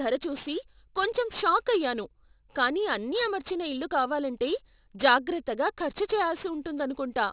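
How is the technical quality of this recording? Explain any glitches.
The quality takes a real hit from aliasing, which runs through the whole clip. The speech sounds like it was dropped to a much lower sample rate, something like 8 kHz, without a filter first, so everything above 4 kHz folded back down into the band. Those mirrored components sit only about 15 dB under the speech, so sibilants come out gritty and metallic, with spurious tones that don't track the voice, and the spectrum runs hard right up to the 4 kHz edge.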